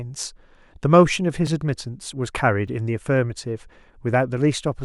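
At 1.47 s and 2.68 s the speech drops into a block of digital silence lasting 2.7 ms and 5.3 ms, which fits unfilled output buffers of 128 and 256 samples. The abrupt cut to zero and back produces a sharp tick each time.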